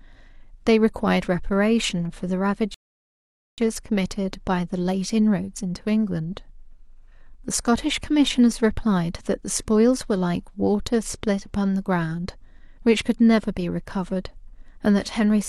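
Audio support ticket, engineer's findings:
Rebuffering stall, 2.74 to 3.58 s. Speech drops to dead silence, then picks up exactly where it left off. Nothing skipped, just about 0.84 s tacked on. Player buffer ran dry; playback waited on the network for more data.

Worth checking the client's buffer target and the delivery throughput around that moment.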